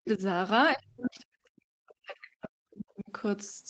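From 0.0 to 0.21 s the speech dips and breaks up, losing roughly 100 ms in all and falling by up to about 40 dB. This is speech suppressed in double talk, likely because the echo canceller could not tell the talker from loudspeaker echo and turned both down. Inside that dip, from 0.06 to 0.11 s, a faint second voice slips through at about 15 dB below the speech. This is the other side's voice leaking through, likely left by incomplete echo removal. From 0.74 to 3.12 s the same suppression returns for around two seconds in total, with drops again reaching about 40 dB. Two brief scraps of the other side come through at 1.03 to 1.1 s and 2.43 to 2.49 s, each about 20 dB below the speech.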